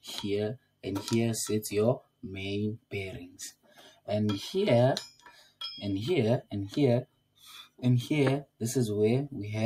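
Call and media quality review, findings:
Noise suppressor applied to music or sounds, active across the whole clip. A speech-tuned suppressor was left in the chain and is treating steady tones, ambience and decays as noise. Level swings by around 10 dB as it clamps and lets go. Attacks get through while sustains and tails sag, so the sound pumps and thins out. Probably just needs bypassing for non-speech material.

Sound cut by the noise suppressor: dips of about 18 dB at 0.57–0.85, 2.01–2.24, 2.78–2.93, 3.30–4.08, 5.11–5.61 and 7.06–7.44 s. Same component grabbing harder, with held or fading material pushed well under and tails chopped short. The longest bite is 3.30–4.08 s. These drops go noticeably deeper than the background swing.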